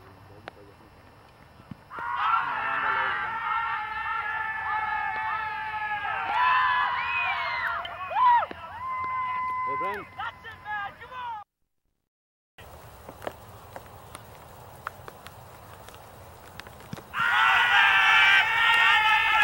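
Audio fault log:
5.16 s and 7.85–7.87 s: damaged data in a compressed stream. Each is a brief glitch, roughly 20 ms long, cutting through the sound and gone immediately. Part of the compressed stream was corrupted at those points, so the decoder misread or rejected the affected frame, briefly lost sync, and searched for the next valid frame header, which is heard as a chirp, click or short hole.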